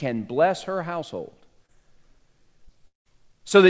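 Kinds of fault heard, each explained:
Short concealed packet loss: About 20 ms of audio arrived too late at 1.66–1.71 s, just after "bless her household", and again at 2.65–2.69 s. The receiver extended the preceding sound and blended back, leaving a brief smear rather than an audible gap.
Long network dropout: From 2.87 to 3.07 s about 180 ms of audio is missing, likely from a network outage. The preceding sound stretches into a fading buzz or hiss, then about 140 ms of near silence before the audio resumes without the lost part.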